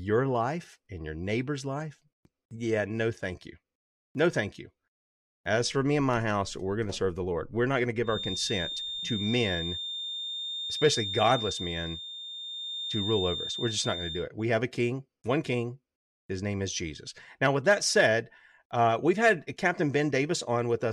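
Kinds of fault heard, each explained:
Feedback whistle: A thin, steady 3.6 kHz tone rides behind the speech from 8.0 to 14.3 s, just after "not going to", somewhat below it, likely a loudspeaker-to-microphone loop held at the edge of feedback.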